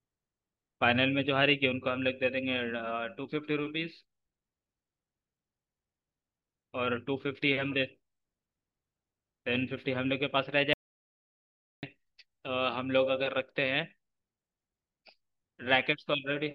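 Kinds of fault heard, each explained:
Audio dropout to silence: the speech cuts off abruptly at 10.73 s and the track goes to dead silence, with no room tone at all, until 11.83 s, so about 1.1 s of speech is simply gone. The likely cause is a lost input link or a brief mute.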